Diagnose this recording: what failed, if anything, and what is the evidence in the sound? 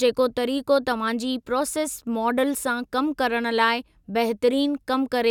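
Nothing in the chain failed: the speech signal stays continuous and intact throughout, with no audible damage introduced at any stage between capture and playback.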